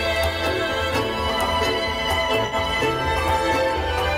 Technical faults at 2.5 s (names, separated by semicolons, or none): AAC frame loss with concealment